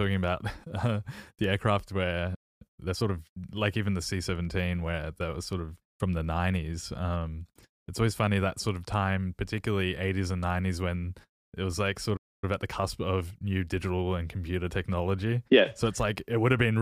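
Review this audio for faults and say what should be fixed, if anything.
The speech cuts out twice, at 2.35 s and again at 12.16 s, each time going silent for about 0.26 s before picking up where it left off. That's a playback stall, most likely the player starving for data or its thread getting blocked.

Right after each gap the player hurries to clear its backlog by snipping and cross-fading tiny slices. That's time-compressed catch-up: 2.62 to 3.12 s runs at 1.5x, and 12.44 to 13.46 s runs at 1.25x, both at normal pitch.

To fix it, give the player a deeper buffer and keep its audio thread from getting blocked, so it never runs dry and has no backlog to rush through.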